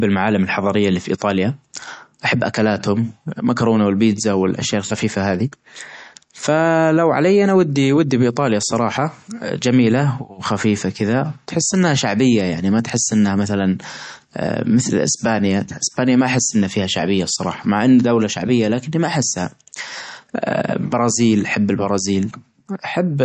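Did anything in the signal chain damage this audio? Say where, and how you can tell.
Yes, at the codec stage: watery, swirly speech with a dulled top end throughout, likely MP3 compression at a low bitrate near 40 kbps, discarding weak frequency lines.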